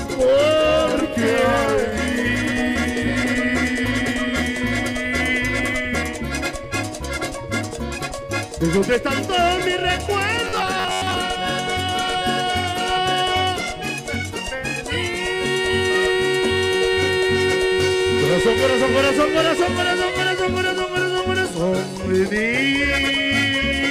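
From 10.44 to 11.15 s, a 93.8 Hz buzz replaces about half the audio: robotic sound, likely from repeated short buffers, without a dropout's gap.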